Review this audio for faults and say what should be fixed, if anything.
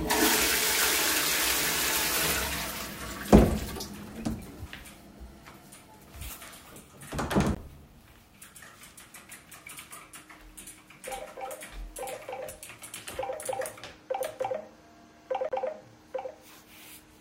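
Bluetooth stall, at 7.55 to 7.57 s and again at 15.49 to 15.52 s: the sound drops abruptly to silence for 19 ms, then for 28 ms, and resumes each time. The likely cause is radio interference holding up packets on the wireless link. The headphones' playback buffer ran empty, so output paused until the resent data arrived. Reducing 2.4 GHz congestion, keeping the source close to the headphones, or using a wired connection would prevent it.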